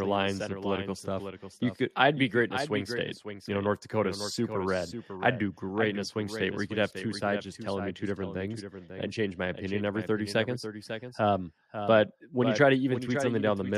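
A second capture path or misaligned edit has likely mixed in a doubled audio track: throughout the speech, a copy about 10 dB quieter trails by roughly half a second.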